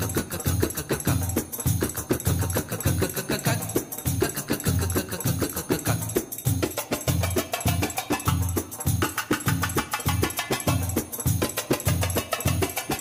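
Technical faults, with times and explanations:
No technical faults can be heard anywhere in this clip. There is nothing in the audio that calls for a timed entry.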